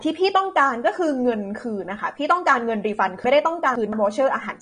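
AAC compression runs through the whole of this speech recording: nothing remains above 9.7 kHz, and the plainly audible smearing and fizzy texture on sibilants are likely the work of AAC-LC at a low bitrate, fitting roughly 32 kbps, where coarse quantisation and a lowered cut-off strip detail. Chunks out of order occur from 3.24 to 3.93 s: one block of about 171 ms plays three blocks later than it should, so the passage sounds jumbled across three hard joins.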